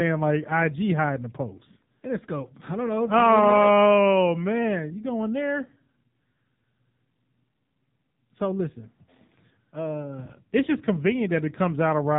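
Thin, boxed-in speech with a buzzy, synthetic edge runs through the whole clip, and nothing reaches above about 3.8 kHz, so sibilants and breath detail are gone. This is the AMR narrowband mobile codec at work. It samples at 8 kHz and rebuilds the voice from a vocal-tract model fed by sparse pulses, and here the damage is heavy, which fits one of its low modes, around 6.7 kbps, where too few bits leave the voice sounding artificial.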